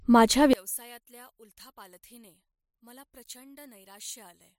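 Speech, with a fault starting at 0.53 s and running to the end. The voice drops by about 26 dB and turns faint. One channel inverted is the likely cause. With reversed polarity, the shared centre content cancels when summed to mono, leaving only the small difference between channels.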